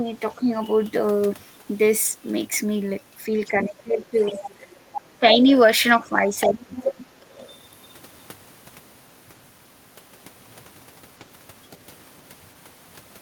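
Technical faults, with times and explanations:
0.00–0.48 s, speech suppressed in double talk: the speech dips slightly for about a tenth of a second, by about 5 dB, likely an echo canceller turning the near talker down while it judged both ends active.
3.45–3.51 s, other side's voice leaking through: a brief, very faint scrap of a second voice, about 30 dB below the speech, likely residual loudspeaker echo the canceller missed.
3.53–4.33 s, speech suppressed in double talk: about half a second of the speech is pushed down, at worst by about 20 dB, likely the canceller attenuating everything during overlap.
4.04–5.13 s, other side's voice leaking through: a second voice runs for about a second at about 15 dB below the speech, likely echo passing through uncancelled.
5.19–7.06 s, speech suppressed in double talk: around a second in total is attenuated, by up to about 15 dB, likely suppression triggered by simultaneous talk.
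6.40–7.48 s, other side's voice leaking through: the second voice comes through about 10 dB under the speech, likely the canceller failing to remove the far-end playback.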